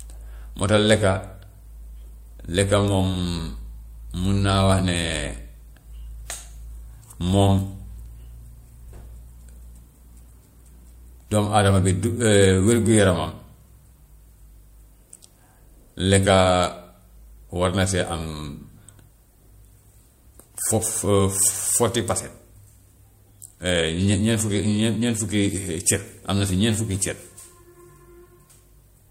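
No technical faults can be heard anywhere in the recording. The speech runs from beginning to end with nothing in the audio chain breaking in.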